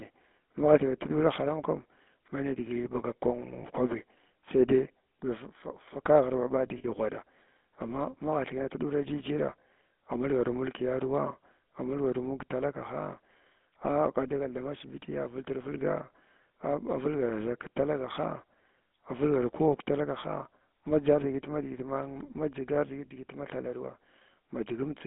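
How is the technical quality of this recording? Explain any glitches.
The technical quality is poor. The speech has passed through a GSM full-rate codec, and there are two brief dropouts where lost GSM frames were concealed.

The GSM full-rate codec damage is plainly audible across the whole clip. The line passes only about 200 Hz to 3.6 kHz, which fits the 13 kbps full-rate coder. The codec rebuilds speech from a vocal-tract filter driven by a sparse pulse excitation, and this gives voiced sounds a buzzy, gravelly roughness. On a spectrogram, all energy above 3.6 kHz is missing, and the harmonics look smeared and grainy.

Lost GSM frames occur at 3.62 to 3.65 s and at 6.78 to 6.85 s. The first gap lasts about 20 ms, which fits one missing frame. The second lasts about 60 ms, which fits three frames. In each gap, the decoder reused the last good frame's parameters, so the sound briefly freezes into a metallic ring. 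A spectrogram shows frozen, repeated spectral bands, and the waveform shows a short, periodic-looking stretch.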